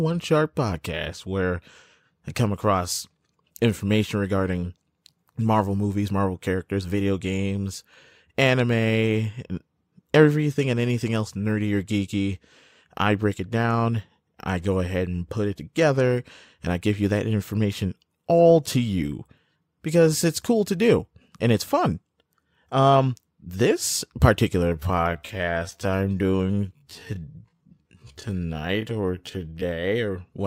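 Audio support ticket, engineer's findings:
Time-stretched section, 24.57–29.91 s, ends right before "or whatever". Pace drops to about 0.57x with pitch unchanged, speech drags. Likely a length-fitting stretch in the editing or playout software, repeating short chunks to pad duration.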